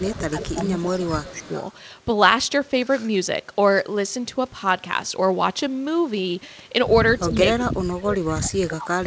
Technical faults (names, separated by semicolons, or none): speech suppressed in double talk; echo leak